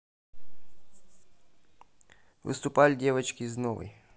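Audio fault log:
No fault is heard in this speech clip.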